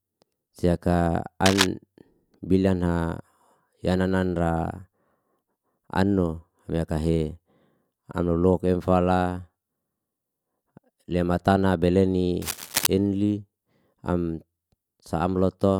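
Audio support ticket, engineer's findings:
Cable scratch noise, 1.46–1.67 s and 12.42–12.88 s (second just after "lea matana bele"). Dense, irregular rustling bursts over the speech, first roughly as loud as the speech, second a little below it. Likely a worn cable or connector being moved, with contact resistance fluctuating rapidly. Differs from digital clicks or dropouts: a sustained gritty texture lasting about 0.2 and 0.5 s, not isolated sharp ticks or gaps.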